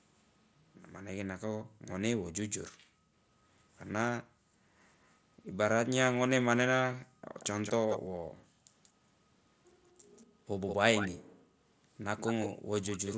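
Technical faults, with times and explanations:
1.64–4.57 s, 7.07–8.71 s and 10.26–12.69 s, background gated by the echo canceller: the room sound drops by about 40 dB, for roughly a second, 0.7 s and half a second in all, while the far-end loudspeaker plays, then returns. Unlike a dropout, the sound is held down rather than cut, and nothing repeats.
5.04–5.1 s and 7.4–13.14 s, echo leak: a delayed copy of the speech comes back, very faint after 234 ms at first, then from 7.4 s a stronger 184 ms copy about 10 dB below the speech. This is likely loudspeaker sound the echo canceller missed. A doubled repeat, unlike reverb's smooth tail.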